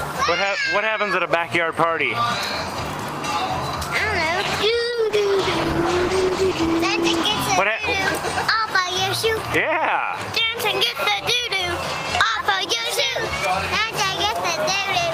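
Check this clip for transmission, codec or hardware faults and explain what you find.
One fault: a call bitrate drop from 4.42 to 7.31 s. Bandwidth dipped, so the encoder coded coarsely and trimmed highs. It sounds rough and muffled, consistent with roughly 32 falling to 11 kbps.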